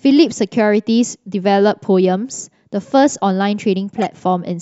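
At 3.98 to 4.06 s the speech breaks into a short squeaky burst, a corrupt frame decoded: damaged bits across a few compressed frames were played anyway, scattering energy to wrong frequencies. A spectrogram shows a brief smeared block; the waveform spikes near -15 dBFS.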